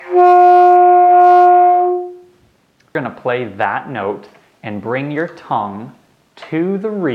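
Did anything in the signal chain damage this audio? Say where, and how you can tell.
Yes. Damaged data in a compressed stream at 2.95 s, a single brief glitch in the sound. The fault sits at the codec stage, in the encoded file or stream rather than in the analogue path or playback hardware. Corrupted or missing bytes at that point mean the decoder cannot read the frame correctly. It loses sync and then locks onto the next valid frame header to resume normal decoding.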